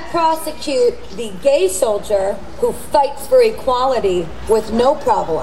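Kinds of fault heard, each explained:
DC offset: The entire waveform sits displaced from the zero line by a constant amount, here about -28 dBFS, and the shift persists for the full duration rather than drifting or appearing at a single point. A steady offset like this is inaudible in itself, but it appears as fixed energy at 0 Hz at the bottom of the spectrum and eats into headroom on one side. Any edit or fade that starts or stops away from zero will click.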